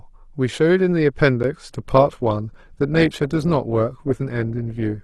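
Speech, with two distinct faults. At 1.43 s a block of digital silence cuts the signal to silence for about 11 ms and then restores it with no fade. The abrupt edges on both sides produce a short tick rather than an audible hole. The length fits a 256-sample buffer that the playback process failed to fill in time, so a buffer underrun is the most plausible cause. From 1.68 s to the end, the audio switches to an adaptive stream at a lower bitrate. Codec artefacts become more prominent. The transition is sudden and leaves no gap, which points to the player stepping down from around 64 kbit/s to around 16 kbit/s Opus after the connection slowed. The lower quality persists for the rest of the clip.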